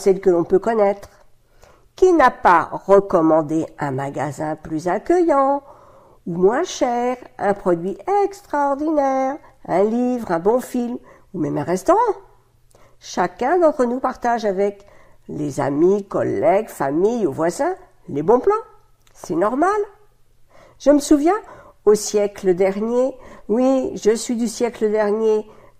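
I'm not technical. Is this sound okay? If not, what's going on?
Yes, nothing wrong with this one: no audible technical faults anywhere in the recording.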